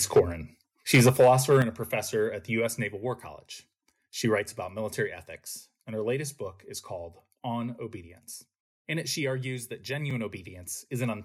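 Microphone overload hits this speech at 0.16–0.2 s and 0.93–1.62 s, where peaks running about 6 dB too hot have their tops sheared off, likely from excessive input volume, leaving a harsh, crackling edge. Microphone volume stepped down at 0.17 s by about 2 dB, at 1.62 s by about 7 dB just before "a professor at the", and at 5.07 s by about 2 dB between "writes about" and "ethics and her latest". Each drop is a sudden level change, likely the call software reacting to a microphone it found too loud or clipping. A block of digital silence at 10.10 s, just after "it she argues that", cuts the signal to silence for 2.9 ms and back, producing a tick that fits a 128-sample buffer left unfilled in time.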